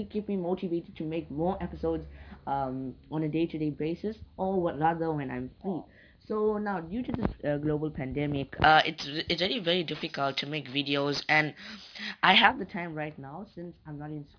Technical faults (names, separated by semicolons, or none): aliasing